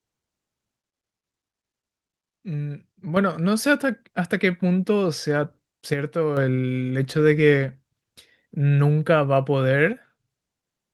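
Three times the speech abruptly drops by about 6 dB and then recovers, most likely because one channel drops out before the mono sum. The drops run from 0.77 to 3.17 s, 5.93 to 6.37 s, and 9.93 to 10.28 s, each starting and ending as a sudden step.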